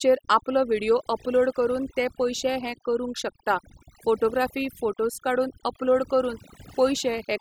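A speech recording suffers from overdone noise removal throughout, where band-by-band suppression set too aggressively has pushed the background down and broken it up into twinkling specks. A noise gate shuts everything between phrases; this carves individual frequencies continuously.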